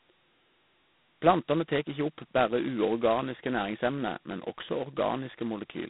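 From start to end, the speech carries G.726 ADPCM damage. The line passes roughly 150 Hz to 3.7 kHz, with nothing above 3.9 kHz. Each sample keeps only a coarse difference from a prediction. The result is a harsh, rasping hiss that rises and falls with the speech, which points to 16 kbit/s coding.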